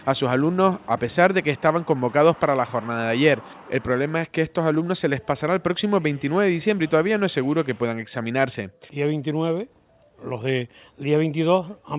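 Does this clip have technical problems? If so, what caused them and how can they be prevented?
No, there are no technical problems in this clip.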